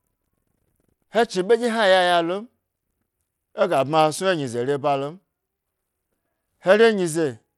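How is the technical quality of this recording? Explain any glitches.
The speech is degraded for its whole 7.6 seconds, likely by Bluetooth SBC compression. A starved bit budget, consistent with roughly 96 kbps, leaves SBC's upper sub-bands with few bits and coarsely quantises the rest, so the treble flickers and a plainly audible gritty grain sits on the sound, with nothing above 21 kHz.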